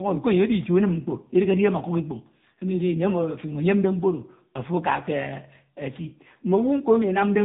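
Tandem speech coding runs throughout, making the speech rough, muffled and warbly. Two lossy speech coders in series stack their damage, and nothing is heard above 3.8 kHz.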